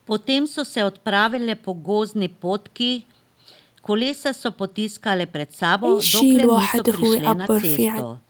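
Packets of this speech went missing in transit, and each was replaced by the low-bitrate backup copy carried in the following packet, so the lost packets were rebuilt from error correction rather than left as gaps. It happens at 1.27 to 1.37 s, 3.99 to 4.13 s, 5.77 s and 7.41 to 7.47 s, with the rebuilt stretches lasting 60, 80, 20 and 40 ms, which fits runs of 20 ms packets. Each patch sounds briefly coarser and noisier, with no dropout.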